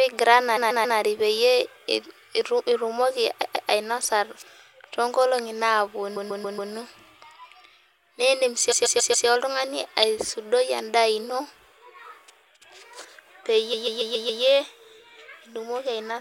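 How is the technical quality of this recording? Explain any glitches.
The recording is marred by repeated frames, heard as stutters at 0.56–0.98 s, 3.42–3.69 s, 6.16–6.71 s, 8.71–9.27 s and 13.73–14.42 s. In each, the same 139 ms block of speech plays again, which fits a short run of compressed frames being written or sent more than once. The block repeats three, two, four, four and five extra times respectively, giving a rapid stammer. Every stutter lengthens the audio, by 0.28 to 0.70 s.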